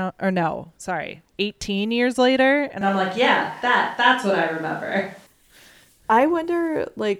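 At 2.82 s, just after "years later", the speech abruptly turns roomy and hollow, with thinner low end and more audible room sound beneath it, though the noise still sits far below the speech and the overall level barely changes. The abrupt onset and the 5.26 s return to close, full sound point to a switch to a distant microphone, likely because the close microphone's feed dropped out and a farther pickup, such as a camera microphone, covered those 2.4 s.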